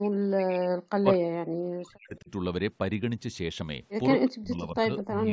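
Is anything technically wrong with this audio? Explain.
Yes. The speech has two faults.

Speech suppressed in double talk occurs from 0.0 to 2.3 s, from 4.19 to 4.92 s, and from 5.09 s to the end. The voice sinks sharply, by roughly 40 dB in the first two spans and much less, around 10 dB, in the last. This is likely an echo canceller mistaking overlapping talk for echo and turning the talker down.

An echo leak appears from 4.98 to 5.04 s. A faint delayed copy of the voice returns about 222 ms late, roughly 15 dB below the speech. It is a brief scrap. The likely cause is a loudspeaker echo that the far side's canceller failed to remove completely.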